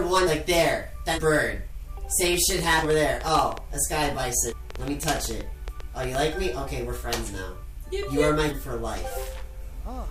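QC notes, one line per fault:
0.26, 1.14, 2.81, 4.48, 8.48 s: compressed frames skipped. Whole 46.4 ms frames never reached playback, so the audio jumps ahead by about 1 s, 0.3 s, 0.2 s, 0.2 s and 0.3 s.
2.28–6.16 s: train of clicks. Likely electrical interference or a faulty connection injects about forty similar pulses, roughly eight per second at uneven spacing, ticking about 10 dB above the sound.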